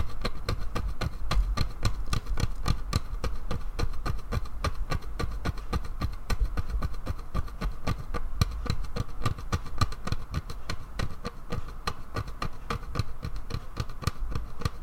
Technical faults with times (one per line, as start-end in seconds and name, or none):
none